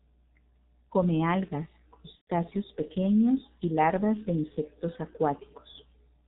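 G.723.1 codec, heard from start to finish: the speech has been squeezed through a very low-rate internet-telephony coder, and the result points to the 6.3 kbit/s mode. Everything above 4 kHz is gone, so the voice is muffled and boxy. Because the coder rebuilds the voice from a coarse model refreshed only every 30 ms frame, the damage here is heavy: a hoarse, rough texture and smeared consonants that lose their edges.

VoIP packet loss concealed by the speech codec, from 2.15 to 2.31 s: about 120 ms of audio never arrived, which fits four consecutive 30 ms frames. In place of the missing audio, the decoder kept repeating its last pitch and vocal-tract settings while turning the level down each frame. That gap comes out as a stretched, buzzy tone or coloured noise that fades away. Since each decoded frame depends on the previous one, the speech stays thin and distorted briefly after the audio resumes.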